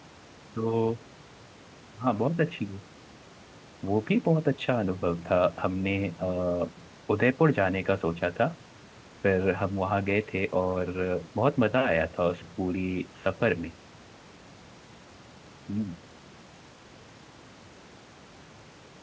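Speech with no technical faults audible anywhere.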